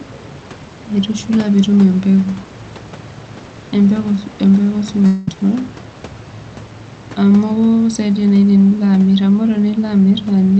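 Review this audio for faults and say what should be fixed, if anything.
From 5.06 to 5.36 s the speech gives way to a buzzy, fading continuation of the preceding sound, most likely a long network dropout. About 200 ms of audio never arrived, and the receiver filled roughly 220 ms by stretching the last sound, so speech resumes without the lost part. A spectrogram shows smeared, flattened harmonics decaying over the low room noise before an abrupt restart, and the waveform shows a repetitive, shrinking envelope. Deeper jitter buffering and Opus forward error correction would help bridge such gaps.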